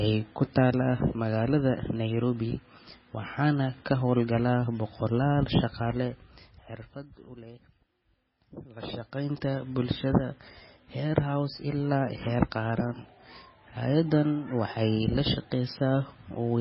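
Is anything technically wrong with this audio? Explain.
Yes. Throughout the speech, the sound is dull and watery, with a swirling, warbling quality and metallic chirps on s sounds, and nothing is present above 5.6 kHz. This is likely heavy MP3 compression at a very low bitrate, roughly 16 kbps. Starved of bits, the encoder cut the treble at that fixed frequency and dropped weaker frequency components, which flicker on and off between frames. That flickering produces the swirl and chirps, and consonant attacks smear.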